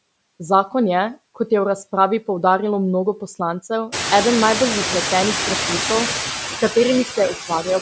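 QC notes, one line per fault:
Throughout: noise suppressor artifacts. Steady noise is pulled down by about 10 dB, leaving fluttery residue that shows on a spectrogram as speckled, patchy low-level energy between syllables, heavier once the room noise rises around 4 s.
6.48–6.76 s and 7.34–7.81 s: speech cut by the noise suppressor. Quiet speech is taken for noise and dropped by about 9 dB and about 13 dB, roughly a tenth of a second each, showing as sudden waveform dips and thinned spectrogram bands.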